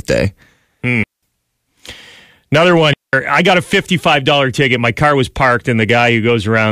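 At 1.03 s the speech drops into a clean hole of near silence lasting about 0.2 s, ending at 1.23 s, and the same thing happens again from 2.94 s to 3.13 s. Both are digital wireless dropouts: the radio link lost too much data, so the receiver muted the output with a very short fade rather than pass corrupted audio. The gaps are silent and sharp-edged, with no burst of noise on either side.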